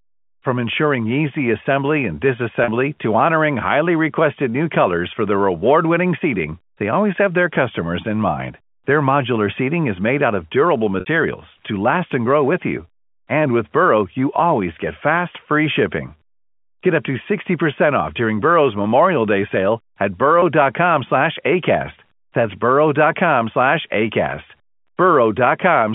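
At 2.64 s, 11.0 s and 20.4 s, packet loss with pitch repetition bridges gaps of 40, 60 and 20 ms. The receiver loops the last pitch period to fill each hole, heard as a brief buzzy hold in the speech at 2.64 s and 20.4 s, while at 11.0 s the repeat fades into silence before the speech returns with a short cross-fade.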